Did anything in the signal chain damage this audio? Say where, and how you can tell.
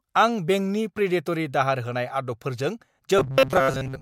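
Yes. Robotic sound from repeated short buffers runs from 3.18 s to the end at 4.02 s, and the likely cause is a buffer underrun in the driver or buffer stage. The speech collapses into a rigid, metallic buzz fixed at 133 Hz that still loosely tracks the syllables. That pitch is one over the loop length, pointing to a segment of about 7.5 ms being replayed while fresh audio fails to arrive, so most of that stretch is repeats and the real signal is skipped.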